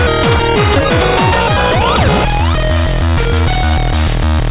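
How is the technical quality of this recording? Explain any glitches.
The recording has two clear glitches, one right after the other, heard through the narrow, telephone-band sound of a call codec with nothing above 4 kHz, which fits G.711 mu-law.

At 0.76 to 0.78 s there is a skip ahead. About a second of audio is simply missing. It was dropped, in transit or by the jitter buffer when it overflowed, while later audio was already queued, and the two sides were joined almost directly. What sets this apart from an ordinary dropout is that no silence or concealment fills the hole. The audio jumps straight from one moment to a much later one.

From 0.79 to 4.15 s a jitter buffer speed-up follows. The buffer was holding more delay than it wanted, so the receiver trimmed short pieces, one or a few pitch periods each, over and over. Together these removed about half a second. The sound runs at about 116% speed and feels rushed, yet its pitch stays where it was. 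That unchanged pitch is what distinguishes it from a faster playback rate or resampling, which would raise the pitch along with the tempo.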